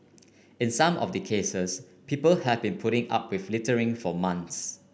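Nothing in this short speech recording stood out as a technical problem on listening.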